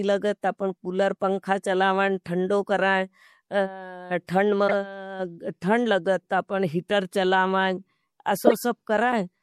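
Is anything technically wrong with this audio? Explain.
Yes. The speech has a dull, watery, swirling quality throughout, likely from MP3 compression dropping treble and weak frequency content, which fits a low bitrate around 64 kbps.

Corrupt frames were also decoded at 4.68 to 4.73 s and 8.42 to 8.53 s. Each time, damaged data spanning a few frames went through the decoder and put energy at wrong frequencies. The result is a short chirpy burst peaking near about -10 dBFS and then about -5 dBFS.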